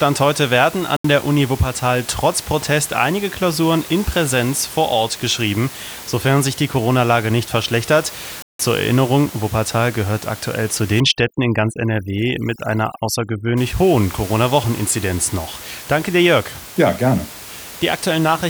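At 0.97 s, right after "heute werden", the speech drops to dead silence for about 80 ms and then resumes, and at 8.42 s, after "nicht verschlechtert", a longer gap of about 170 ms does the same. These sound like a Bluetooth stall, likely caused by radio interference delaying packets until the headphones' buffer emptied and playback froze while the resent data came in. From 11.00 s to 13.57 s, following "gehört aktuell zu", the room noise, normally about 17 dB below the speech, suddenly gives way to near silence flecked with twinkling specks. That is overdone noise removal: the reduction was set too strong, so it pushed individual frequency bands near its noise estimate almost to nothing, stripping out the quieter parts of the voice together with the background.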